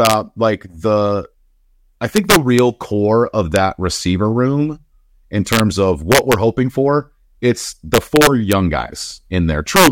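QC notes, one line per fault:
0.05–0.13 s, 2.16–2.59 s, 3.56 s, 5.53–5.60 s, 6.12–6.33 s, 7.94–8.53 s, 9.76–9.87 s, integer overflow: loud peaks pushed about 0 to 6 dB past the integer ceiling wrap to the opposite sign instead of limiting, giving violent cracks much sharper than clipping. The waveform shows peaks snapping across the full range, and the spectrogram shows broadband vertical streaks.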